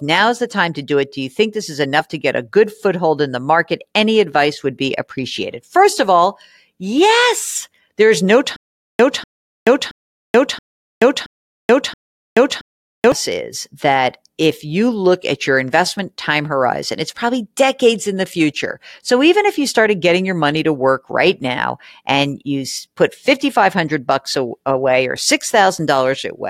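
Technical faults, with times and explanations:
8.56 to 13.12 s, stutter with silent gaps: a 244 ms burst of speech repeats six times, each followed by about 430 ms of dead digital silence, cycling every 675 ms. This likely comes from playback stalling and replaying its last fragment on each retry, losing the speech meant for those moments.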